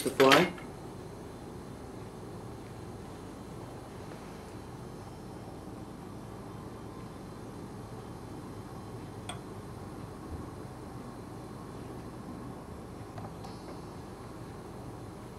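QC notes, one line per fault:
No faults were heard in this audio. Nothing in the sound calls for a timed entry.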